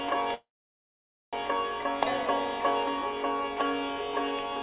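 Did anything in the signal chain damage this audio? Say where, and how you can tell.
Yes, the network and jitter buffer stage. At 0.34 s the sound turns into a brief fading buzz, then about 0.88 s of silence, and resumes at 1.35 s with nothing lost. That's a call audio freeze, likely packets stalling and draining the buffer. The G.711 band edge near 4 kHz is simply how the call path sounds.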